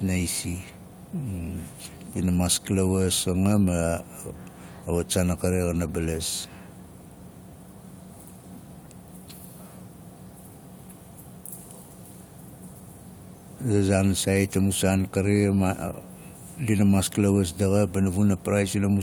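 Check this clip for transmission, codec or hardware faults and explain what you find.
Nothing turned up here worth flagging: the speech comes across steady and intact, with no sign of trouble from the transmission path, the encoding, or the gear it passed through.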